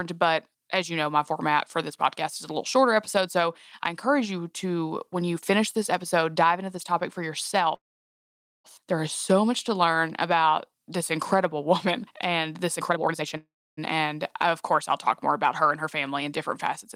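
Right after "into this topic for", at 7.75 s, there's a call audio freeze: a short buzz that fades to silence for most of 0.89 s. Then the sound resumes where it stopped, likely because packets were delayed and the jitter buffer ran dry. After "woman and this", from 12.78 to 13.37 s, a jitter buffer speed-up snips out pitch-period slices, roughly 0.4 s in all. It runs at 168% speed with unchanged pitch, so it sounds rushed. A second freeze follows at once, 13.37 to 13.79 s, with a 0.41 s gap that is mostly silent.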